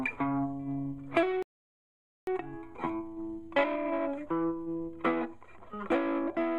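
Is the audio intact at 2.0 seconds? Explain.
No, 2.0 s falls inside a playback stall running from 1.43 to 2.27 s. The sound cuts out mid-flow for about 0.85 s, most likely because the player ran short of data or its thread got blocked, leaving the output silent until it recovered.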